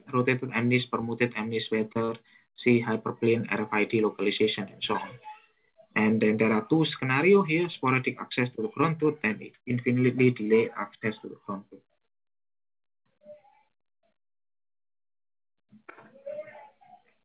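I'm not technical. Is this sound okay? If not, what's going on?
No. There are six tiny hiccups, each a short concealed packet loss: at 1.01 to 1.03 s, 2.05 to 2.09 s, 4.93 to 4.95 s, 7.73 s, 9.69 to 9.71 s and 10.74 to 10.76 s. Each time, a sliver of the call arrived too late, and the receiver patched it by stretching the sound just before it. Instead of a silent gap or a harsh click, you hear a brief smear or wobble. The one at 2.05 s is the longest. The dull, muffled top end comes from the phone-style call codec, not from these faults.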